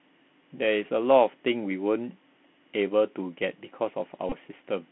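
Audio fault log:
throughout Bluetooth CVSD headset codec. The speech sits in a narrow band from about 150 Hz to 3.5 kHz. Nothing brighter survives. The sound fits a 64 kbit/s CVSD link, where each sample is a single up-or-down bit. The step size chases the signal and lags on fast, loud high content. Sibilants come out rough and scratchy. A fine granular hiss stays under the speech. The damage is plainly audible.
4.29 to 4.33 s Bluetooth headset packet repeated. A short burst of buzz cuts into the speech here. Lost data was filled by decoding the previous packet's bits again. About 22.5 ms went missing, which points to a run of roughly six packets. Each repeat recurs every 3.75 ms. That steady repetition produces a tone near 267 Hz. The buzz stops once good packets arrive again.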